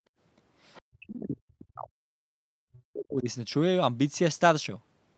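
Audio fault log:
0.00–0.13 s, background gated by the echo canceller: Right at the start the room sound dips by about 33 dB for around 70 ms in total. The canceller clamped the mic while the loudspeaker was playing, then let go, so the background briefly vanishes and comes back.
0.74–0.82 s, other side's voice leaking through: A short, faint scrap of a second voice appears, sitting around 30 dB below the talker. It's likely the far end's audio from the loudspeaker that the echo canceller didn't fully scrub out of the mic signal.
0.84–2.42 s and 2.64–3.28 s, speech suppressed in double talk: The talker's voice sinks by around 40 dB, roughly 1.5 s in the first stretch and 0.7 s in the second. The likely cause is both sides talking at once, with the canceller ducking everything because it couldn't tell the talker from the echo. Nothing reaches above 8 kHz, which fits the call's band limit.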